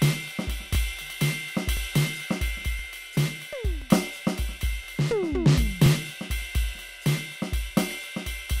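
Music with overlapping chunks, a short stutter at each of these joins: 0.75–0.77, 1.77–1.79, 2.79–2.82, 3.82–3.84, 4.84–4.86, 5.86–5.89, 6.89–6.91 and 7.91–7.93 s. The audio was handled in 1.0 s blocks, each starting about 23 ms before the previous one ended, so that slice plays twice. Unlike a dropout, nothing goes missing. The music briefly repeats, giving a clockwork hiccup once per second.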